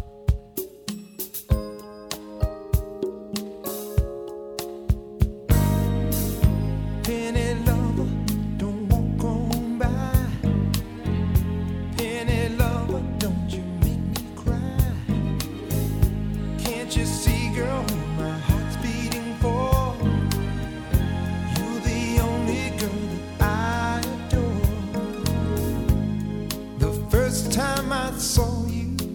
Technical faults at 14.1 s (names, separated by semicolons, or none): damaged data in a compressed stream